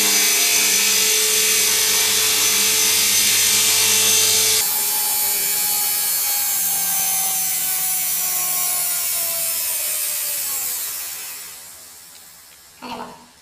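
From 4.61 s to the end, the audio shows planar audio read as interleaved: 24 ms blocks of separate left and right samples are read as alternating pairs, so each block plays twice at double speed. The sound jumps an octave up with a flutter at 41.7 Hz.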